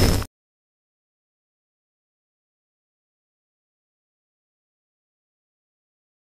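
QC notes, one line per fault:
Throughout: block size mismatch (truncated), each block's tail dropped, which fits a 256-sample read, causing a 172 Hz buzz and 1.88 times speed at near-normal pitch.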